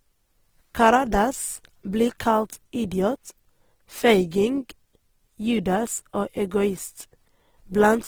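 Throughout this speech recording the sound is rough and grainy, with a noisy, sandpapery texture even though the top end reaches about 20.2 kHz. This is likely Opus compression in its music (CELT) mode, consistent with a low bitrate of about 16 kbps.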